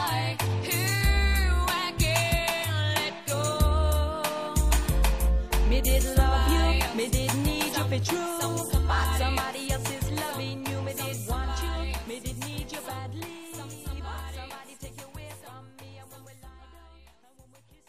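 No faults can be heard anywhere in the clip.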